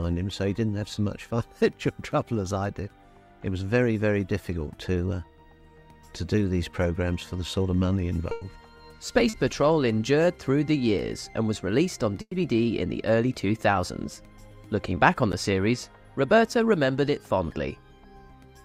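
Burst of packet loss at 8.31 to 8.43 s: about 100 ms never arrived, so the receiver stretched and faded the last sound before resuming further on. Short concealed packet loss at 9.29 to 9.35 s: a 40 ms gap was filled by continuing the preceding sound, heard as a brief smear before blending back. Burst of packet loss again at 12.21 to 12.33 s: 100 ms went missing, and the extended sound fades away into about 50 ms of silence before the audio returns with that stretch skipped. Block of digital silence at 15.32 s: roughly 10 ms of audio cut abruptly to silence, most likely because the output buffer wasn't filled in time, heard as a tick or dip.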